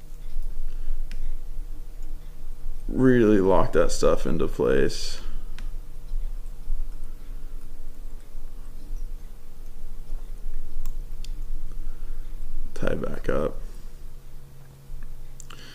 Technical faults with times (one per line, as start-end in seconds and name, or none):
none